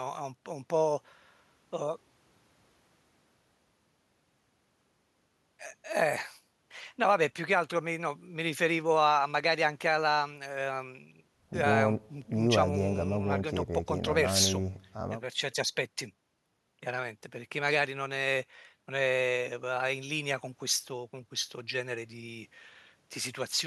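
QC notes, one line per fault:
Nothing to flag here; I didn't hear any faults anywhere in the clip.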